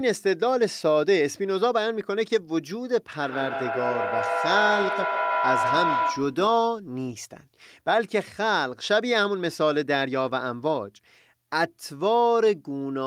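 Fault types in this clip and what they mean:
Feedback howl: from 3.14 to 6.49 s a tone around 1 kHz swells up, pulsing at roughly 150 ms intervals and peaking about 3 dB below the speech. Sound leaving a loudspeaker re-enters a microphone and gains level on each round trip, so the repeats grow rather than fade and narrow onto the frequency the loop favours, here near 1 kHz, with the pulsing set by the loop's delay until the loop is broken.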